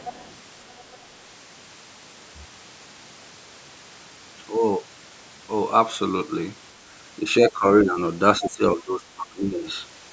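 Right at the start, from 0.0 to 0.35 s and again from 0.68 to 0.98 s, there's a second, fainter voice under the talker. It's the other side's voice leaking through, likely because the loudspeaker playback reached the mic and the echo canceller didn't fully subtract it. The first scrap sits well below the speech, about 15 dB down. The second is much fainter, around 30 dB down, so it's more of a ghostly trace.

Later the talker's own voice gets ducked in pieces: 7.41 to 7.65 s, 7.83 to 7.98 s, then a longer stretch from 8.4 to 9.66 s. That's speech suppressed in double talk. Both sides were most likely talking at once, and the canceller couldn't tell its talker from the echo, so it pulled everything down. The first dip is about 10 dB and the second a milder 5 dB, each brief. The last one goes about 20 dB deep for roughly a second, so the voice really sags there.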